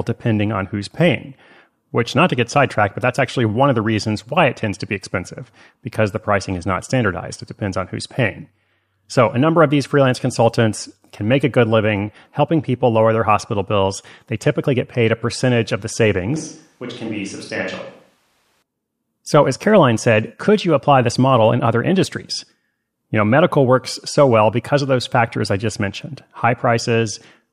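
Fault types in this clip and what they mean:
Switch to a distant microphone: Just after "a percentage of the", at 16.36 s, the speech suddenly turns roomy and hollow. The bass thins out and the level drops by about 5 dB. Room noise rises to roughly 35 dB below the speech. At 18.62 s the close, full sound returns just as abruptly. The likely cause is that the close microphone dropped out and a farther one, such as a camera microphone, filled the gap.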